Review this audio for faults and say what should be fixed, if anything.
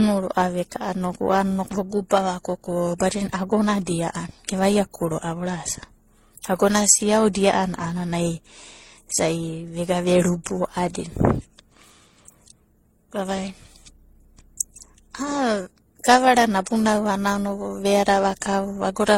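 Periodic clock jitter, throughout: a converter clock wobbling at around 1 kHz puts sidebands on every component of the speech, giving a rough, metallic edge that disappears in pauses.

Transcoding between lossy codecs, throughout: artefacts of several kinds stack up and nothing survives above 16.2 kHz, likely from an MP3, Opus and finally HE-AAC chain.

To prevent both, clean up the converter's clock supply and shielding, and encode once from the original recording rather than re-encoding already compressed files.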